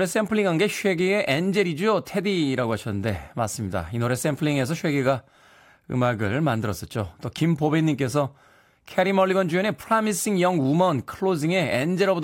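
No technical faults can be heard anywhere in the speech. There is nothing to flag at any point in the recording.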